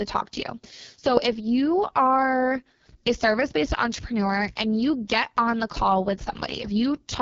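Throughout the speech, an AMR wideband (HD Voice) codec running at a very low rate, which fits its lowest 6.6 kbit/s mode, models the voice too coarsely and pads the top band with shaped noise, leaving it rough, raspy and heavily damaged, with nothing above 7.3 kHz.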